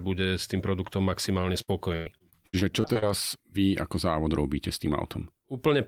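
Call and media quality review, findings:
Repeated packet loss (robotic sound), 1.61–3.04 s, after "s tým produktom maximálne": choppy speech with pieces missing. About ten dropouts, longest 97 ms, each patched by extending the previous sound; roughly a quarter of the span is concealed. Probable component: network path / jitter buffer.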